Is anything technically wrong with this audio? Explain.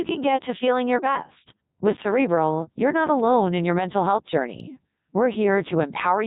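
Yes. Throughout, the speech sounds robotic and buzzy, with a synthetic, hollow tone. This is Codec 2 vocoder processing at 3.2 kbit/s, and the damage is heavy. Codec 2 does not keep the waveform. It transmits only pitch, voicing, energy and a coarse spectral envelope, and the decoder rebuilds the voice from sine waves. That is why the speech keeps its rough outline but loses the texture of a real voice.

There are also two sharp, isolated ticks, at 3.19 s and 4.35 s. Each is a brief broadband click that has nothing to do with the speech around it. These are bit error spikes. A single flipped bit makes a sample's value leap by a power of two and then snap back. The first tick sounds consistent with two or three corrupted samples in a row, and the second with just one.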